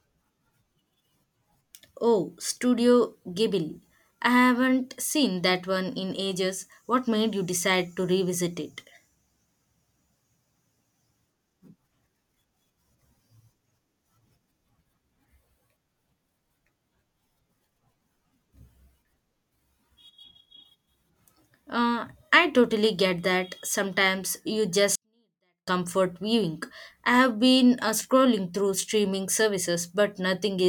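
At 24.95 s the speech suddenly drops out almost to nothing and stays that way until 25.68 s, which is a 24-bit alignment error, the too-quiet kind. The samples were packed as 24-bit values in the low bytes of a 32-bit word but got read back as full 32-bit integers, so everything lands eight bits short. That's about 48 dB down, clean but nearly inaudible, for roughly 0.7 s.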